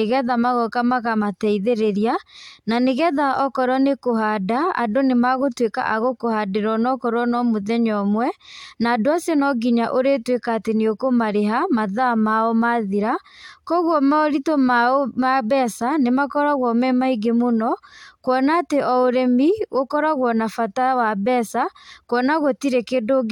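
Speech recording with no audible technical faults anywhere.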